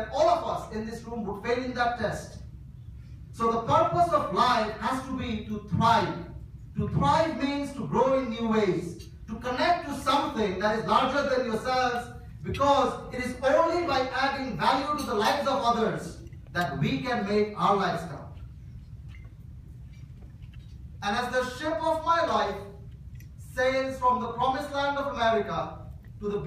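From start to finish, a steady buzz sits under the sound at about 43.1 Hz, and the playback runs at normal speed (1.0 times) and normal pitch. This is a block size mismatch (truncated). One stage hands over blocks longer than the next stage takes in, and the tail of each block is discarded. The resulting discontinuity repeats once per block. The 43.1 Hz rate fits blocks of 1024 samples.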